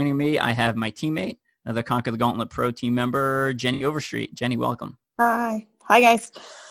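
AAC frame loss with concealment occurs from 3.74 to 3.84 s, just after "team member". Roughly 64 ms of coded audio, consistent with three lost frames, is missing, and the decoder rebuilds the gap from the last good spectrum, leaving a brief smeared, noisy, phasey patch.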